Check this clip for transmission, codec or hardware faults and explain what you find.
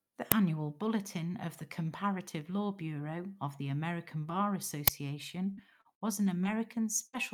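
Yes, there are four kinds of fault in this speech clip, all in the signal path rather than in the recording itself.

Uninitialised buffer, at 0.32 s and again at 4.88 s. In each case a playback block went out before any audio had been written into it, so whatever stale values sat in memory were played as samples. The result is a sudden, loud crackle of digital noise lasting only a few milliseconds: about 2.7 ms the first time, which fits a 128-sample buffer, and about 5.3 ms the second, which fits a 256-sample buffer. A codec glitch would soften or smear the signal. These bursts bear no relation to the speech, which sets them apart.

Repeated packet loss (robotic sound), from 5.51 to 6.47 s. Over this stretch five separate gaps open up, the longest 59 ms. Each gap is patched by stretching the previous sound for about 174 ms in total, roughly 18% of the span, while around 180 ms of the original never arrives and a small part is rebuilt. 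The speech turns choppy. What marks it out from a single dropout is the recurring stutter: one repair follows closely on another.

Burst of packet loss, from 7.07 to 7.15 s. This time the loss comes in one run of roughly 60 ms, all consecutive. The receiver holds the last sound for about 63 ms and lets it decay, so a voiced sound becomes a sustained buzz that fades, or a noisier sound becomes a dying hiss. Speech then resumes further along, with that portion gone. Unlike the robotic stretch, there is one continuous hole here rather than a series of short ones.

Lost packet rebuilt from error correction, from 7.13 to 7.15 s, at the tail of that burst. This packet was carried again, at low bitrate, inside the packet that followed it, and the decoder played that backup copy. As a result, 20 ms of audio returns rather than falling silent. It is rougher and grainier than the surrounding speech. 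The difference from concealment is that this is real content, only coarser, not a held or faded copy of the previous sound.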